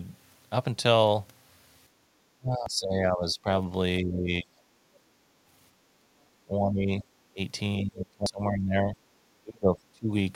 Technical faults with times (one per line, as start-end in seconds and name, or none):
1.89-2.06 background gated by the echo canceller
2.34-3.49 speech suppressed in double talk
2.66 audio missing between chunks
4.01-4.62 speech suppressed in double talk
6.32-7.10 speech suppressed in double talk
7.81-9.06 speech suppressed in double talk
8.26 audio missing between chunks
9.43-10.11 speech suppressed in double talk